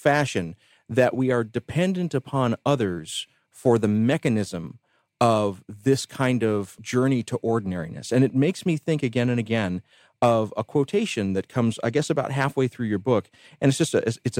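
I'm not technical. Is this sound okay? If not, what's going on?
Yes, nothing in the recording points to a technical problem with how it was captured or played back.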